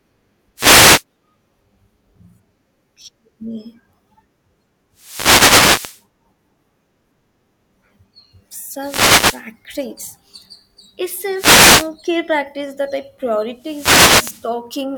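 Wireless microphone noise hits at 0.56–1.04, 4.94–6.04, 8.80–9.45, 11.34–11.91 and 13.55–14.51 s: reflections cancel the FM radio signal, letting receiver noise swell into brief static swishes over the speech.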